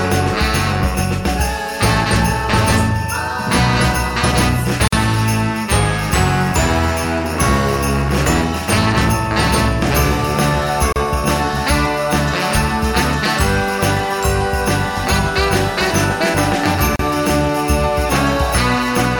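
A gap at a join of encoded pieces opens at 4.88 s for about 48 ms, then again at 10.93 s and 16.96 s, each about 34 ms, spaced 6 s apart. Separately encoded segments were joined without trimming, so each piece's start-up delay and final-frame padding stayed in as short gaps. The sound cuts out abruptly, with smeared edges, and resumes exactly where it stopped.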